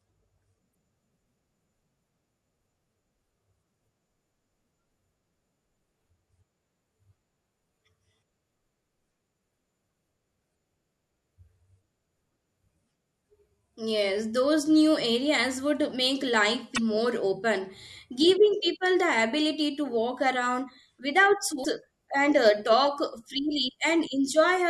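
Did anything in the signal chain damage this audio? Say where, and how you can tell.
Yes. The damage sits at the codec stage: damaged data in the compressed stream. Brief disruptions break through the speech at 0.71 to 0.73 s, 16.74 to 16.78 s and 21.61 to 21.65 s. Each marks corrupt frames the decoder misread before resyncing.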